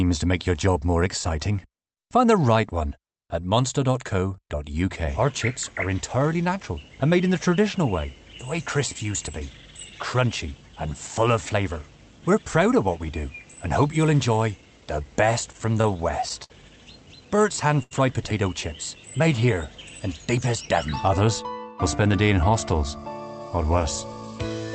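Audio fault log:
15.52 to 16.52 s and 17.36 to 17.93 s, repeated stalls (stutter): the audio keeps catching and dragging in these two stretches, five short hitches in the first and four in the second, the longest about 80 ms. Packets were turning up late, so the jitter buffer kept running dry and the receiver stretched out the last bit of sound to cover each wait, roughly 115 ms of fill in the first run and 111 ms in the second. Nothing actually drops out, it just stumbles.
19.17 to 19.55 s, jitter buffer slow-down: here things briefly run at about 91% speed with the pitch unchanged, so the sound feels a touch drawn out. The buffer was low, and to rebuild some reserve the receiver repeated tiny pitch-period-sized slices over and over, adding about 42 ms in under half a second. That repetition is what gives the slightly stretched, almost sluggish quality.
21.82 to 22.83 s, jitter buffer speed-up: the opposite move, with the audio running at about 109% speed, same pitch, so it comes across a bit rushed for about a second. 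The buffer had built up more than it wanted, likely after delayed packets landed together, and the receiver trimmed out short pitch-period chunks in quick succession, something like a tenth of a second in total, to pull the delay back down.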